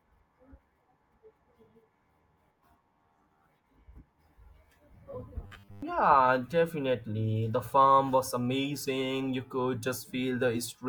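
From 5.44 to 5.82 s the speech turns into robotic sound from repeated short buffers. For those 0.38 s the voice becomes a hard, metallic buzz pitched at 100 Hz. It still loosely follows the words. The likely cause is audio arriving too late, so playback keeps repeating the last 10 ms chunk to fill the gap. That repetition sets the fixed buzz. Most of the stretch is repeats, and the real audio underneath is skipped.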